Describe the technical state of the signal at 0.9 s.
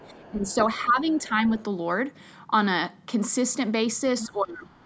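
At 0.9 s you're inside a stretch of speech suppressed in double talk, running from 0.83 to 1.52 s. The speech dips by up to around 10 dB in patches adding up to roughly a third of a second. The likely cause is an echo canceller mistaking the talker for far-end echo while both sides spoke, and turning everything down.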